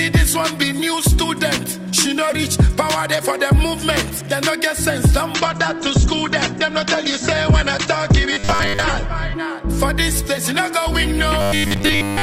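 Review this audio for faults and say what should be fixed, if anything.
From 5.34 s to 9.34 s, the sound switches to an adaptive stream at a lower bitrate. The change is abrupt, with no gap. Codec artefacts rise throughout the stretch. This fits a slowed connection forcing the player onto a version encoded at around 12 kbit/s instead of 64 kbit/s. At 9.34 s, full quality returns just as suddenly. To prevent it, give the player a larger buffer or a steadier connection so it stays on the higher-bitrate version.

Two stretches have robotic sound from repeated short buffers: 8.33 to 8.84 s, and 11.41 s to the end of the clip. The sound becomes a rigid, metallic buzz fixed at 100 Hz, though it still loosely follows the original contour. This likely comes from audio arriving too seldom, so the software keeps replaying the last 10 ms to fill the gaps. Most of the real audio in those stretches is skipped. 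To prevent it, make sure audio blocks are delivered on time, for example with a larger jitter or playback buffer.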